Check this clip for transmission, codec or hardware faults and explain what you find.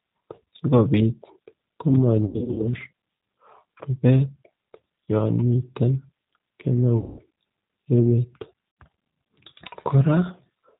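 Two faults are present: the G.729 codec throughout, and four bursts of VoIP packet loss concealed by the speech codec.

G.729 codec, whole clip: the speech is rebuilt from a vocal tract filter, pitch predictor and sparse pulses, which fits an 8 kbit/s G.729A stream. It sounds plainly rough and synthetic. On a spectrogram, nothing appears above 4 kHz, and the harmonics look smeared.

VoIP packet loss concealed by the speech codec, at 2.26–2.73 s, 3.78–3.84 s, 6.98–7.21 s and 8.71–8.77 s: the decoder extrapolated lost frames from its last pitch and filter while lowering the gain. The first burst loses 240 ms scattered over 320 ms, with runs up to 80 ms. The third loses 200 ms, the fourth 60 ms and the second 20 ms. They are heard as stretched sound, a buzzy tone or coloured noise, that fades and leaves the speech weak just afterwards. The waveform shows decaying, stretched stretches of the last sound.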